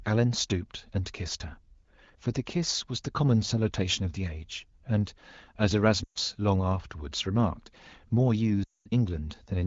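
Lost AMR speech frames at 6.04–6.18 s and 8.63–8.87 s: corrupted wideband frames were concealed with decaying repeats, so the speech fades toward silence, then returns weak.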